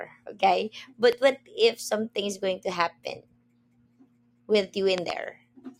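A loud pop, two in quick succession, lands at 1.13 to 1.30 s, about 10 dB above the speech, and again at 4.98 to 5.12 s, about 15 dB above. Each likely comes from a voltage pulse entering the chain. Unlike a dropout, the speech continues underneath.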